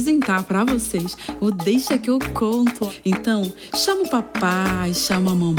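No technical faults can be heard anywhere in the audio. There is nothing to point to at any moment.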